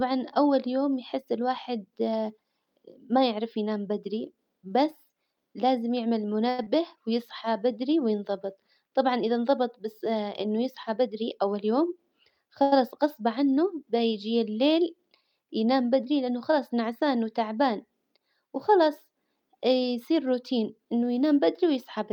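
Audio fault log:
6.49–6.60 s and 12.62–12.73 s, short stall from a late packet: the last sound is held about 92 ms, then 97 ms; repeated periodic stripes on the spectrogram, nothing lost.
6.64–6.67 s, short concealed packet loss: 28 ms of synthesized fill bridges a 70 ms gap, cutting delay by about 40 ms; a brief smeared patch.
6.75–7.72 s, jitter buffer slow-down: repeated pitch periods add 51 ms, so audio plays at 95% speed with unchanged pitch; harmonics stay level while spectrogram features stretch slightly wider.
10.88–11.89 s and 20.10–21.27 s, jitter buffer speed-up: removed pitch periods, roughly 100 ms each, give 109% and 108% speed at unchanged pitch; spectrogram features compress horizontally, harmonics unshifted.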